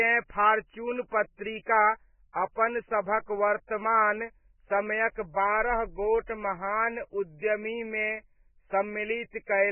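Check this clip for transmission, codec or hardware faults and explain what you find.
The speech carries heavy codec damage from start to finish, most plausibly Vorbis compression at a very low bitrate.

Vorbis compression, throughout: the audio has nothing above about 3 kHz, and what remains of the upper band sounds hissy and grainy rather than clean. That points to a likely Vorbis encode at a rate near 9 kbps. The encoder has dropped its cut-off and quantised the surviving treble so coarsely that fine spectral detail is replaced by noise of similar energy. Vowels sound roughened and consonant onsets come across blurred.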